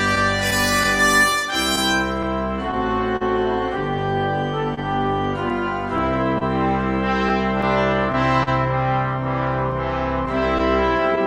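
Clock drift between sender and receiver runs through the whole clip. The sending side's clock is running slow, by something like 2 percent, so audio arrives a little slower than it's played out. The jitter buffer keeps draining, and the receiver has to stretch or repeat bits to keep going, sometimes running dry for an instant. You hear that as small, irregular timing hiccups from start to finish, never settling into a steady rhythm.

On top of that there are three stretches of scattered short gaps. From 0.15 to 3.23 s, half a dozen or so lost packets get patched by carrying the previous sound forward. That adds up to around a tenth of a second, and the longest hole is about 40 ms. The same happens from 4.75 to 8.49 s, again with roughly half a dozen fills totalling around 150 ms and nothing much over 40 ms. A lighter run from 9.71 to 11.19 s has a few tiny ones of around 10 ms each. Each shows up as a brief tick, smear or stutter in otherwise clear audio.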